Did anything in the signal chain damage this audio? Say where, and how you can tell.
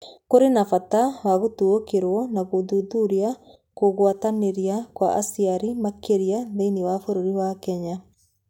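No, nothing in the signal chain audibly damaged this speech recording. Listening across the whole clip, there is no point where any stage of the chain leaves an audible mark on the sound.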